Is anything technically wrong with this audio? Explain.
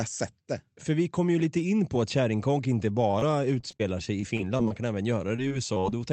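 Yes. The speech has two stretches of repeated packet loss (robotic sound). The first runs from 3.11 to 4.72 s, starting just after "på att kärringkonk inte", with about a dozen short dropouts. The second runs from 5.19 to 5.94 s, with about six dropouts. In both stretches the gaps last at most 22 to 27 ms and are patched over about 14% of the stretch.

The mechanism is that packets arrived late or not at all, again and again. Each time, the receiver filled the hole by extending the last sound it had received. Because the holes come in quick succession, the voice turns choppy, with fragments missing.

On a waveform this appears as short runs of repeated, periodic cycles. On a spectrogram it shows as smeared, flattened harmonics and small discontinuities. The spectrum stops near 8 kHz, which is the normal limit of the Opus call path.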